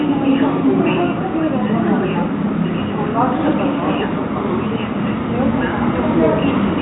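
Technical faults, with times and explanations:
Nothing stood out on listening to this audio.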